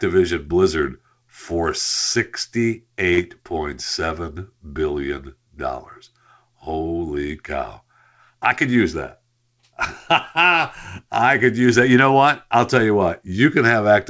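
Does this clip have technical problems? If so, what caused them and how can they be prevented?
Yes. A short concealed packet loss occurs at 3.14 to 3.20 s. About 40 ms of the call arrived too late, so the receiver extended the preceding sound and blended back into the real audio, leaving a brief smear. A steadier network path, forward error correction or a slightly deeper jitter buffer would prevent it.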